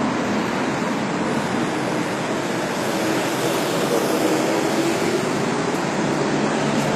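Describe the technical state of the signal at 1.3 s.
At 1.3 s the sound carries plainly audible HE-AAC compression damage, present throughout, likely from a low rate around 24 kbps. Its treble is regenerated from copied lower bands, so highs sound gritty and metallic. A spectrogram shows repeated patterns above the crossover and nothing above 14.9 kHz.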